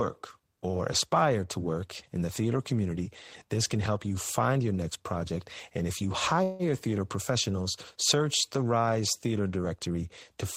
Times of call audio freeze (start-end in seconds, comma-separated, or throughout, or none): 6.43-6.62